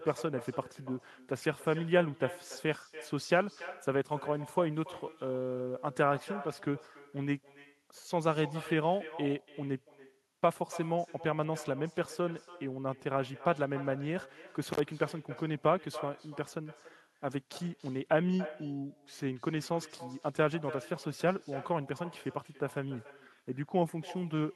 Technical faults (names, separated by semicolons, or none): echo with no canceller; intermittent contact